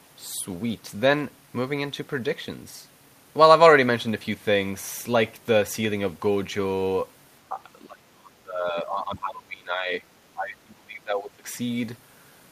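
Speech that dips slightly at 7.49 to 7.59 s, then drops deeply, around 25 dB, across 7.82 to 10.03 s and 10.34 to 11.46 s: likely speech suppressed in double talk, the echo canceller turning everything down while the far side talked. The waveform envelope caves in, and the spectrogram fades.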